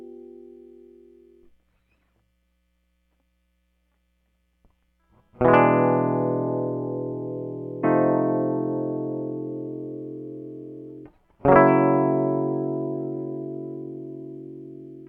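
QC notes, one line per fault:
7.83 s, stream segment skipped: the music jumps forward abruptly with a brief blip, the phrase breaking off and resuming further along. This is likely a segment of the stream that failed to load, so the player dropped that stretch and continued with the next.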